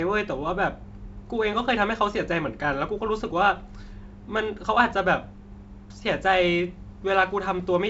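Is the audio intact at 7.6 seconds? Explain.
Yes, the audio is intact at 7.6 seconds, with the G.722 wideband telephone coding carrying the speech at 64 kbit/s and no fault at that moment.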